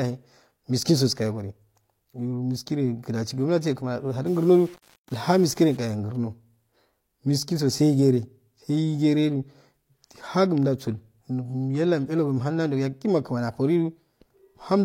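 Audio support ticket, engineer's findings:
Likely low bit depth without dither, 4.27–5.77 s: speech requantised to about 7 bits by plain rounding, no dither applied. Quantisation error tracks the waveform instead of forming a steady hiss, so distortion sits roughly 30 dB under the signal and moves with it. Audible as grainy, gritty speech through that stretch. Quietest parts break up, sputtering between adjacent steps or dropping to silence. Suspect a gain or format-conversion stage in the chain.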